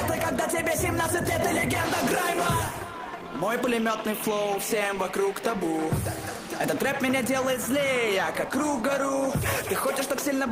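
No technical faults can be heard in this audio.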